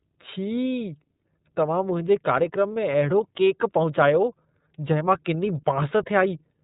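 iLBC codec damage, present from start to finish of the speech. This narrowband VoIP codec cuts everything above about 3.8 kHz, so sibilants and breathiness lose their top end and the sound is dull and boxed-in. It codes each frame's excitation on its own rather than predicting from the previous one, and the plainly audible roughness and slightly synthetic edge fit the 30 ms frame mode at 13.33 kbps.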